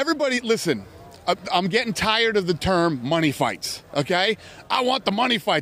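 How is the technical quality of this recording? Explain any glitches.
No technical glitches are audible anywhere in the recording.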